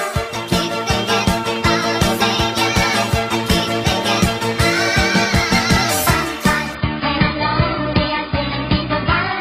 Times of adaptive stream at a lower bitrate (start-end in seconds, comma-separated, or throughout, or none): 6.75-9.41